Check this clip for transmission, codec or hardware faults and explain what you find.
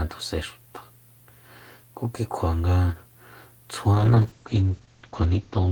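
One transmission fault is present: a call bitrate drop starting at 3.95 s and lasting to the end of the clip, about 1.8 s. From that point the speech loses its upper range as the audio bandwidth narrows from about 20 kHz to 8 kHz, and it takes on a coarse, watery texture. The call's bandwidth estimate fell, so the encoder had far fewer bits per frame. It quantised the spectrum more crudely and discarded high frequencies. The degradation is consistent with a fall from roughly 32 kbps to around 8 kbps, and no recovery is heard before the clip ends.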